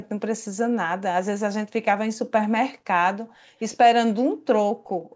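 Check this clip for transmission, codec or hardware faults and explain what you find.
Two kinds of fault turn up: faint echo leaks early and late, and a gated background at the very end. The clean cutoff at 8 kHz is the call's own microphone processing, not a fault.

Echo leak, at 0.02 to 0.09 s and 3.59 to 3.77 s: a faint, delayed ghost of the speech trails by about 120 ms, about 30 dB down at first and about 25 dB down later. The likely cause is a far-end loudspeaker whose echo canceller let some pickup slip back.

Background gated by the echo canceller, from 4.76 s to the end: the room sound dips sharply, as deep as about 39 dB, for roughly a third of a second. The canceller clamped the microphone while the loudspeaker played, muting the ambience with it.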